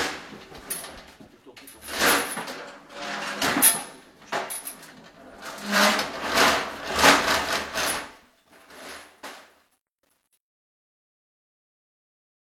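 Truncation distortion on a fade runs from 7.18 s to the end at 12.59 s, worst from 8.35 s onward. The fade-out, which starts around 7 s, passes through a volume stage that keeps only about 11 bits and adds no dither, so the tail of the sound turns gritty. AAC frame loss with concealment occurs at 8.95 s. A gap of about 43 ms, which fits a single lost frame, was filled from the preceding spectrum, leaving a brief smeared, noisy patch.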